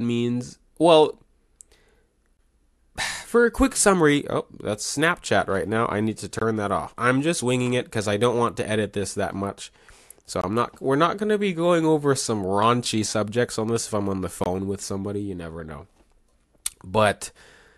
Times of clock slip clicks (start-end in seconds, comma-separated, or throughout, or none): none